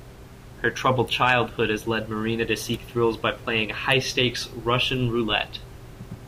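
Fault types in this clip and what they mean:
No fault types are present in the clip.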